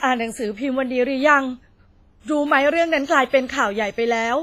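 From start to end the speech carries heavy transform-codec damage, likely WMA compression at a low bitrate, which fits roughly 24 kbps. Quantisation noise smears over tens of milliseconds, giving a ringing, washy tone with hiss that swells and fades with the signal. On a spectrogram the content stops flat at 15.5 kHz, weak harmonics vanish into blocky gaps, and pre-echo haze spreads before sharp onsets in the waveform.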